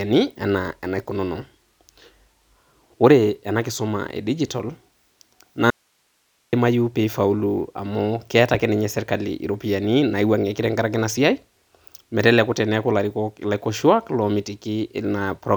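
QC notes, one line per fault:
5.70–6.53 s, audio dropout to a faint residue: speech cuts abruptly to hiss about 45 dB down until "pee eifaulu"; likely upstream signal loss while the path stayed live.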